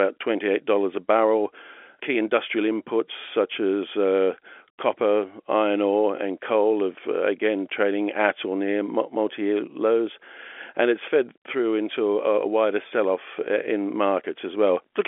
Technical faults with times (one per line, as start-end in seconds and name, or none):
none